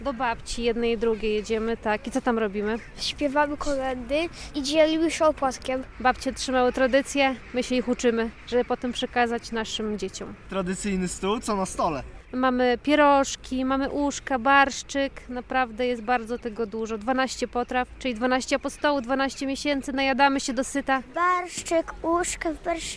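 No technical faults can be heard anywhere in the recording.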